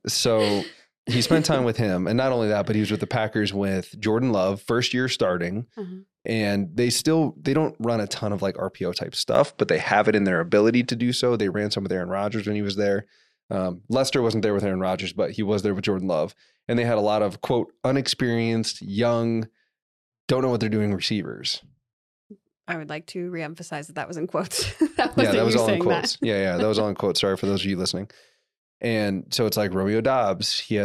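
From 9.35 to 10.90 s the speech abruptly loses its top end, with nothing above 10.1 kHz, shifts in level by a few decibels and picks up a faint new background noise well beneath it. It then clears again just before "do so", with no gap at either change. This points to an input switched to a poorer device, likely a second, narrower-band microphone that briefly replaced the main one before the recording switched back.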